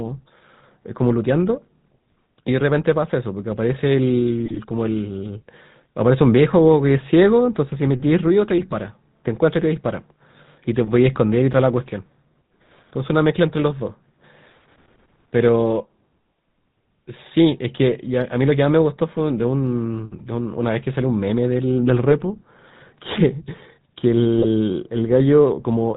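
Throughout, the GSM full-rate codec leaves the speech buzzy and gravelly with nothing above 4 kHz, consistent with 13 kbit/s pulse-excited vocal-tract coding. From 8.57 to 8.78 s, GSM bit errors corrupt decoder parameters, bending the spectrum and level into brief squawks, pops and gargling.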